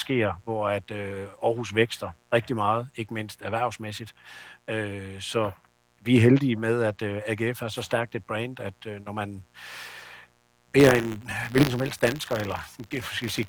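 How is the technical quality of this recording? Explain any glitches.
A steady, raspy buzz sits under the whole recording, and from 10.79 s to the end at 13.48 s the speech takes on a robotic rattle. The fullband Opus voice coding at 24 kbps adds only light damage.

Mains buzz: Throughout the clip there is a harsh buzz about 35 dB below the speech. It is built on 60 Hz, and its harmonics stack up into the kilohertz range. A dimmer, a rectifier or a missing shield is letting sharp switching spikes into the signal path twice per mains cycle. Those spikes are what give the buzz its grainy edge, rather than a smooth hum.

Buffer tearing: From 10.79 s to 13.48 s the speech gains a mechanical rattle at 100 Hz that tracks the signal. The program writing the playback ring buffer and the hardware reading it have drifted out of step, so they cross in every period. That 100 Hz rate fits a 10 ms buffer period. 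A small sliver of each period, roughly 40 ms stale (one lap around the buffer), replays with hard joins on both sides.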